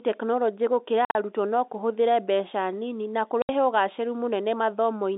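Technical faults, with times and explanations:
1.05 to 1.15 s and 3.42 to 3.49 s, packet loss filled with silence: the first event drops about 90 ms of audio in broken holes spread over 100 ms, the longest 50 ms; the second is a 70 ms gap. Gaps in 10 ms steps suggest 10 ms packets. Each hole is true silence with a hard edge, not the smeared or repeated sound that concealment would insert, so nothing covers the missing audio.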